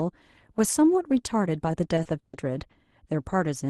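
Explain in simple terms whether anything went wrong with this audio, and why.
Between 1.95 and 2.71 s, the call kept losing chunks of data in transit, leaving four gaps, the longest 140 ms. This repeated packet loss (robotic sound) was patched by stretching the last sound, so about a quarter of that stretch sounds choppy.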